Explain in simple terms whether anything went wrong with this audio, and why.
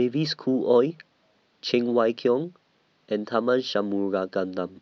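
Nothing went wrong; I hear no technical problems here.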